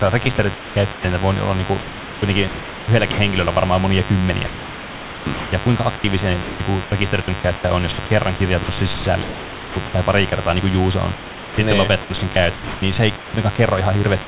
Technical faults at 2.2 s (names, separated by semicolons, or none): mains buzz; sound chopped by the voice detector